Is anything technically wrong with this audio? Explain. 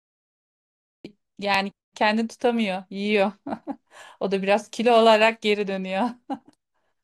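Yes, there are two faults. The speech begins with a cut-off start: digital silence until 1.05 s, then the sound jumps in mid-sound, with no attack or fade. The recording or stream started late and caught the sound already under way.

Overlapping chunks cause a brief stutter between 1.54 and 1.57 s, where about 23 ms of audio plays twice. The audio was handled in 2.5-second chunks, and this chunk began before the previous one ended, duplicating the overlap at the join.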